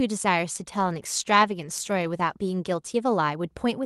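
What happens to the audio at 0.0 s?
Nothing goes wrong at 0.0 s: the audio is intact there, passing through the call path with no dropout, glitch or other fault at that moment.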